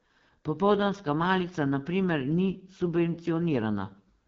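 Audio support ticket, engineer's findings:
Rough, raspy speech texture throughout, plainly audible coding damage; band ends at 7.4 kHz. Component: AMR wideband (HD Voice) codec, low mode, consistent with 8.85 kbit/s. Sparse pulse excitation coarsens the excitation driving the vocal tract model; top band is noise-filled.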